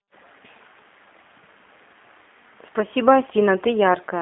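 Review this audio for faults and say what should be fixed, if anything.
G.729 codec damage runs throughout. The speech sounds rough and synthetic, consistent with 8 kbit/s coding. Nothing passes above 3.8 kHz, and the band sits near 250 Hz to 3.7 kHz. Prevent it with a wideband codec end to end.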